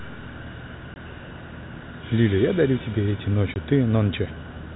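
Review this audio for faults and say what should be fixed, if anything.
There's packet loss filled with silence in two spots, from 0.94 to 0.96 s and from 3.54 to 3.56 s. Each gap is a clean 20 ms hole where the receiver had nothing to play and inserted silence. That length fits a single lost 20 ms packet each time. The abrupt cut in and out of the speech is heard over the G.711 telephone band that tops out at 4 kHz. To prevent it, add packet loss concealment on the receiver and a jitter buffer that can ride out late packets.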